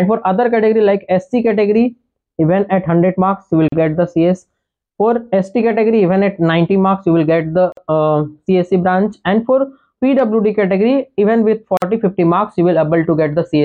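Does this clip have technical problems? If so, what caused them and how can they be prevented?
Yes, there's a gap at a join of encoded pieces every 4 s: silences at 3.68 s (40 ms), 7.72 s and 11.77 s (49 ms each), then the sound picks up where it stopped. Each piece kept its encoder delay and end padding. Trim both when joining, or encode in one pass.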